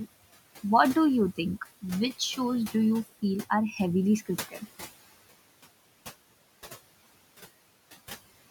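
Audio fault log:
throughout: noise suppressor artifacts. Bands judged to be steady noise are cut by about 17 dB frame by frame, so the room noise, about 18 dB below the speech, sinks in pauses and returns under speech. On a spectrogram, the noise floor darkens and fills back in with the speech.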